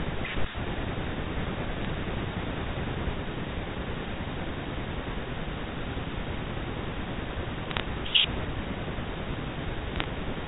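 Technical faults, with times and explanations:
1.81–1.90 s, 6.12 s, 7.70–7.80 s and 9.96–10.04 s, bit errors on a digital phone line: roughly one and a half to three bits in a thousand were flipped on the G.711 A-law link, so single samples jump to wrong values and produce short sharp ticks and crackle over the speech.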